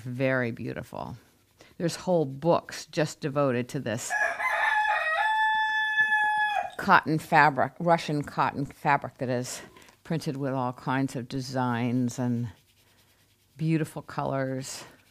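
At 8.66 s and again at 11.35 s there is a DC step. The waveform's zero line suddenly jumps by about -35 dBFS. A 20 Hz high-pass pulls it back down. Each jump sounds like a low thump under the continuing sound.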